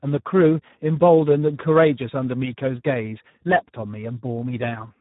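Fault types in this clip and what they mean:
Speex codec: low-bitrate CELP coding, heavily damaged, likely about 8 kbps, leaving speech noisy and hoarse; spectrogram shows nothing above 3.8 kHz throughout.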